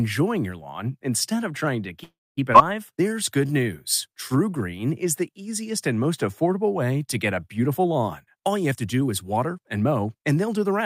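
A call audio freeze runs from 2.03 to 2.39 s. The speech stops and the last sound is carried on as a fading buzz or hiss that dies away, leaving about 240 ms of silence inside the 338 ms filled stretch. The likely cause is packets held up in transit so the jitter buffer ran dry. When they arrive, the speech resumes exactly where it stopped, so nothing is lost but everything after it lands about 0.34 s late.

A skip ahead follows at 2.53 to 2.56 s. Playback jumps forward with only a tiny join of about 9 ms, and roughly 0.2 s of speech is gone, the two sides spliced almost directly together. This is a stretch dropped while later audio was already waiting, either lost on the way or discarded when the buffer overflowed. It pulls back part of the lag the freeze introduced.

Jitter buffer slow-down appears from 2.93 to 3.64 s and again from 4.08 to 4.81 s. The speech runs at about 90% and 89% speed while the pitch stays put, because the receiver repeats single pitch periods or slivers of pause over and over to rebuild its reserve. 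That adds 78 ms and 88 ms respectively, so sounds are slightly drawn out.

Jitter buffer speed-up covers 8.08 to 10.81 s. Here the buffer held more than its target, so the receiver clipped out short pieces of one or a few pitch periods again and again. Roughly 0.3 s is removed across the stretch, and the speech plays at about 110% speed with unchanged pitch, coming across as noticeably hurried toward the end of the clip.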